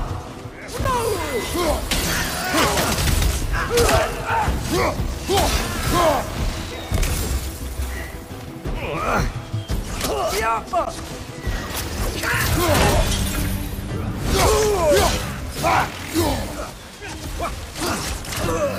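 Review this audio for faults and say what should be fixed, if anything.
Two brief dropouts break the otherwise continuous sound, at 0.84 s and 10.85 s, each a gap with smeared edges, about 9.1 ms and 16 ms long, after which the sound resumes exactly where it left off. These are gaps at a join of encoded pieces: the audio was encoded in chunks ten seconds apart, and each chunk's encoder start-up delay and padded final frame were left in when the chunks were butted together. To prevent this, trim each piece's encoder delay and end padding before joining, or encode the full stream in one pass.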